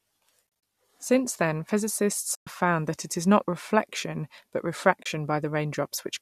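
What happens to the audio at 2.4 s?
AAC frame loss with muting drops the sound from 2.35 to 2.47 s, after "then physicists". The decoder zeroes the lost frames, so overlapping windows fade into a soft-edged gap.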